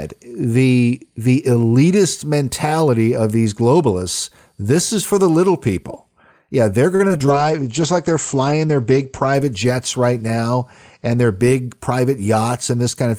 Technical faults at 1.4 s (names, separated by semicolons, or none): none